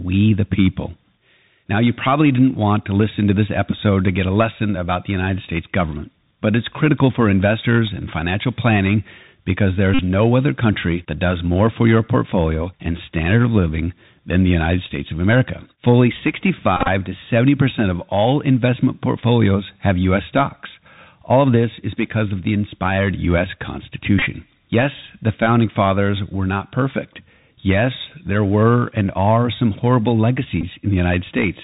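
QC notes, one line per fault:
Throughout, Bluetooth CVSD headset codec: the audio sounds squeezed through a narrowband headset link, with nothing above 4 kHz, which fits 64 kbit/s CVSD. The damage is plainly audible. The codec sends one up-or-down bit per sample with an adapting step, so loud high bursts outrun it and crunch, s sounds come out scratchy, and a grainy hiss sits under the speech the whole way.
9.94–9.99 s, 16.77–16.88 s, 24.19–24.24 s, 30.61–30.64 s, Bluetooth headset packet repeated: the link dropped voice packets, and the chip replayed the last good packet's bits in their place. The first hits right after "and financial planning because", just before "no other country that", with about 49 ms covered. Around 16.8 s, about 71 ms of repeats are spread over 113 ms. At 24.2 s, about 26 ms are spread over 53 ms. The 16.8 s and 24.2 s events each contain runs of around 20 ms. The last comes just after "and are some horrible", about 19 ms. 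In each run the same 3.75 ms packet repeats, giving a short buzz near 267 Hz until clean packets resume.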